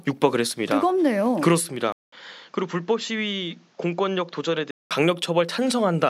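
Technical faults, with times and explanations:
1.92 to 4.91 s, input switched to a poorer device: after a 200 ms gap the speech turns duller and a few dB quieter, with nothing above 7.6 kHz and a faint new noise floor, likely from the recording input changing to a narrower-band microphone before switching back.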